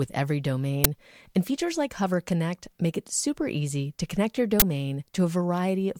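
At 0.84 s and again from 4.60 to 4.62 s, an uninitialised buffer plays leftover memory as audio: loud digital noise bursts, fitting 512- and 1024-sample blocks, unlike silent dropouts.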